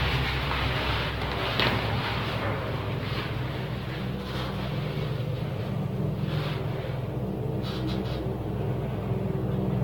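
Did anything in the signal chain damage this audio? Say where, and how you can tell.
Yes, at the codec stage. The whole clip sounds swirly, smeared and hollow, transients blur, and nothing reaches above 17 kHz. That's likely generation loss from roughly ten AAC-LC passes at around 96 kbit/s, each re-quantising on a shifted frame grid.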